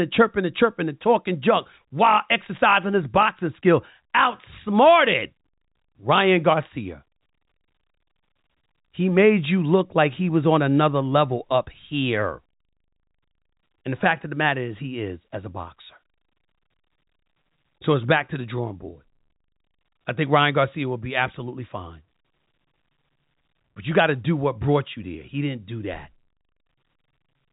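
The speech carries G.711 A-law telephone coding, with its band stopping at 3.8 kHz and at most a faint quantisation noise that follows the level, and nothing in it stands out as a fault.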